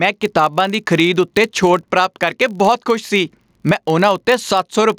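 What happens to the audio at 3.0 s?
At 3.0 s, as throughout the speech, a filter restarted on every block is audible. The filter drops its stored state at each block boundary and starts again from silence, so every block opens with a small click. These arrive at about 43.1 Hz, which fits a 1024-sample block, and merge into a low buzz that rises and falls with the loudness of the speech.

Gain pumping is also present at that moment, as it is across the whole clip. The gain is pulled down each time a loud sound arrives, a swing of roughly 15 dB, so loud and quiet passages sit unnaturally close in level and the sound feels squashed. The likely cause is input gain set far too high, with a fast limiter or compressor clamping down on every peak.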